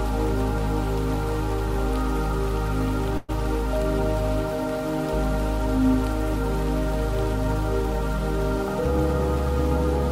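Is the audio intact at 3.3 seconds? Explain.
No. A call audio freeze from 3.17 to 3.31 s fills about 0.11 s with a fading buzz, likely from delayed packets emptying the jitter buffer. Unlike a dropout, nothing is lost. The audio resumes where it stopped, 0.11 s late.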